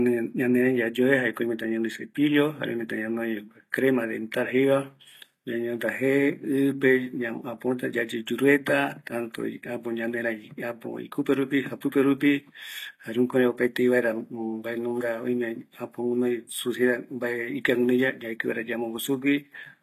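A speech recording with plainly audible HE-AAC compression throughout, likely from a low-bitrate stream around 24 kbps. Only the lower band is coded; the treble is copied up from below and shaped coarsely, so its harmonics sound synthetic and misaligned. Nothing remains above 14.9 kHz.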